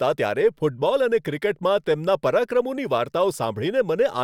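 No technical faults can be heard anywhere in the speech. At no point does the audio break, stall or change in a way that points to a problem in how it was captured or delivered.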